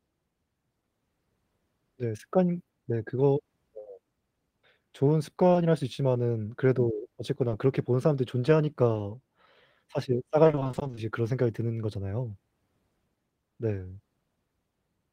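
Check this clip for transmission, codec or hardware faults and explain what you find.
Two kinds of network trouble turn up in this speech, both from packets not arriving in time, and no codec or hardware faults.

Short concealed packet loss first. There are brief blips at 5.53 s, 7.49 s and 8.93 s, and the last one runs straight into another at 8.97 s, so around 8.93 to 9.01 s you get a slightly longer hiccup. Each time a sliver of audio, about 20 ms, never made it to the decoder. The receiver covered the hole by stretching out whatever came just before and then blended back into the real signal. You hear a quick smear or wobble rather than a clean gap.

Then there's repeated packet loss (robotic sound) from 10.43 to 10.99 s. Across that half second the losses keep coming, each no longer than about 20 ms, and the pattern points to a dozen or more separate dropouts. Roughly half of the stretch ends up being patched audio instead of the real thing. 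Because one concealment barely finishes before the next begins, the speech goes choppy, with bits of it simply missing.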